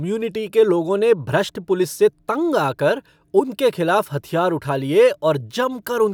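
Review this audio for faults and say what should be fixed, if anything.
Nothing to fix: no faults found in the speech, so no corrective work is needed.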